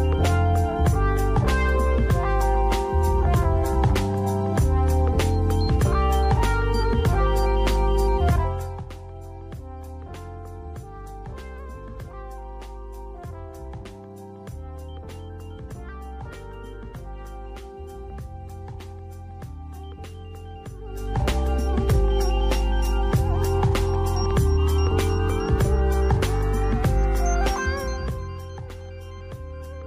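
No technical faults can be heard here.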